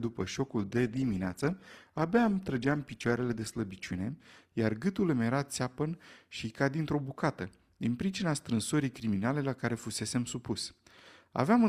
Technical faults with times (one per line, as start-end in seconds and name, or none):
0.00-4.00 adaptive stream starting at a low bitrate